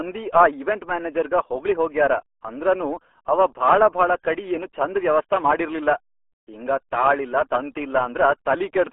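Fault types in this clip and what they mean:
RealAudio 14.4 codec: Heavy low-rate coding, consistent with an 8 kbit/s dial-up speech codec, leaves the speech muffled and gargly throughout. A spectrogram shows a hard ceiling near 3.7 kHz, a telephone-style 300 to 3400 Hz band, and smeared, blocky harmonics.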